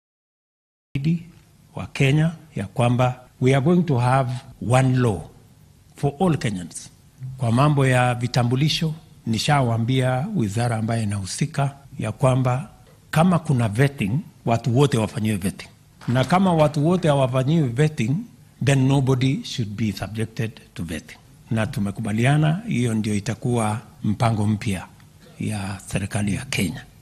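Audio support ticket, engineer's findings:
Cut-off start: digital silence 0.00 to 0.95 s, then the sound enters abruptly at 0.95 s, already mid-event with no attack or fade. Probable component is the capture/stream start, which opened late and truncated the head of the sound. Differs from a noise-gate or slow fade-in: there is no ramp, and the onset is missing rather than attenuated.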